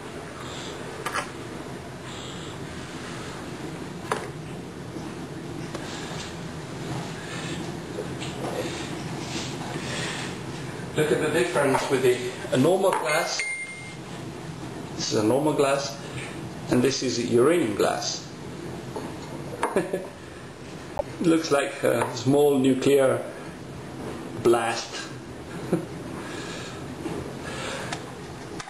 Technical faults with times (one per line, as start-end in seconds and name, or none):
11.78-11.81 corrupt frame decoded
15.85-15.87 corrupt frame decoded
16.92 corrupt frame decoded
20.97-21.02 corrupt frame decoded